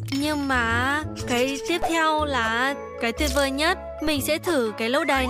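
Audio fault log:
1.82 s and 4.07 s: DC step, the zero line jumps about -22 dBFS then decays through a 5 Hz high-pass, each giving a low thump or click under unchanged sound.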